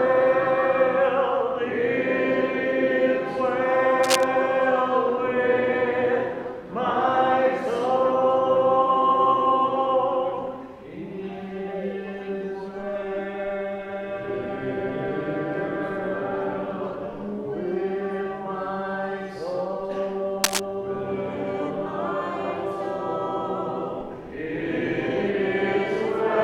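Cable scratch noise appears at 4.03 to 4.25 s and again at 20.44 to 20.60 s: brief, dense bursts of scratchy rustling, roughly as loud as the sound itself, likely from a worn cable or connector whose contact resistance fluctuated as it moved.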